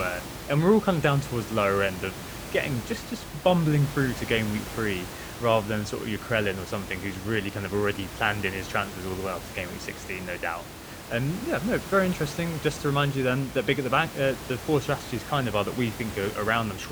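No technical faults can be heard anywhere in the recording. A steady background noise from the room sits about 12 dB below the speech, which is part of the recorded environment rather than anything the system introduced.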